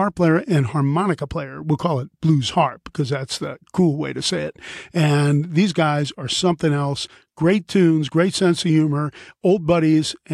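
No technical faults can be heard.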